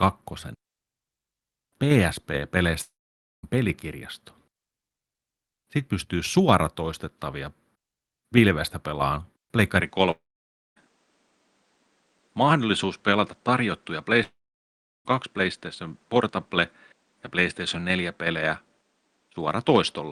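Speech carried over an Opus call link, with three long network dropouts, likely from lost packets: at 2.81–3.45 s, 10.11–10.78 s and 14.23–15.07 s, a brief fading buzz or hiss continues the last sound before about 0.52, 0.56 and 0.72 s of silence, and speech resumes with that stretch missing rather than delayed. From 9.81 s, just after "pilvestä pelaan", to the end, the input was likely switched to a poorer device. The top end drops to nothing above 9.7 kHz, well under the call path's 12 kHz ceiling, and a new noise floor appears roughly 45 dB below the speech. There is no gap and no level jump, so the change is a sustained shift in tone rather than a momentary break.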